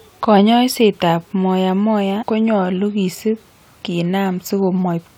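Damaged data in a compressed stream at 2.22 s, just before "konyolu kisip", breaks the speech with a short glitch. Some of the encoded bytes at that point were corrupted, so the decoder could not read the affected frame properly. It either produced garbage from the bad data or discarded it, then lost its place in the bitstream and had to find the next valid frame header before normal playback could continue.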